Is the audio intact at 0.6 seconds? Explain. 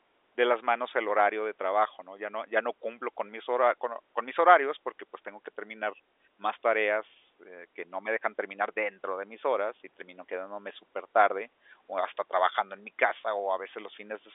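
Yes, the speech at 0.6 seconds is intact, carried through the G.711 telephone coding with its usual narrow band that stops near 3.7 kHz and no break or damage at that moment.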